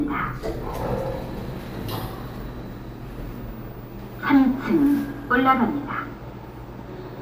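No technical faults can be heard anywhere in the clip. The sounds in it come through unbroken from one moment to the next.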